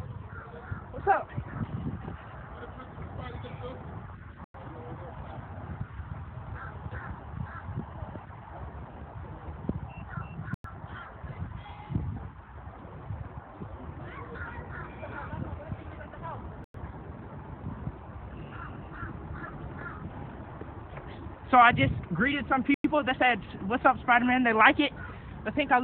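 At 4.44 to 4.54 s, 10.54 to 10.64 s, 16.64 to 16.74 s and 22.74 to 22.84 s the sound drops out for 100 ms each time. That's a gap between chunks: the audio arrives in 6-second pieces, and each join leaves a short stretch of silence before the next piece plays. Nothing gets cut from the sound; it's just pushed apart, so you hear short holes repeating every 6.1 s.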